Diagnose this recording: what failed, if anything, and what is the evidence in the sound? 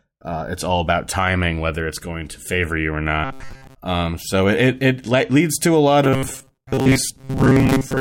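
Robotic sound from repeated short buffers, at the driver or buffer stage. From 3.24 to 3.76 s, just after "to favor you or", the speech turns into a rigid, metallic buzz at 133 Hz. It returns at 6.04 s, after "leads to a lot", and lasts to the end. Most of the audio in those spans is repeated material. The likely cause is buffers arriving too late, with the last block of about 7.5 ms replayed to fill each gap.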